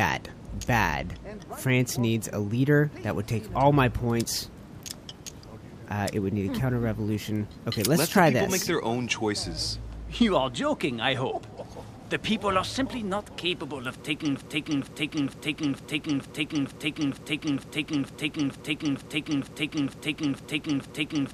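At 14.36 s the player or stream likely stalled and kept resending the last fragment it held, causing a broken-record loop: a 0.46 s piece repeats exactly, back to back, fifteen times until the clip ends, replacing whatever audio should have followed.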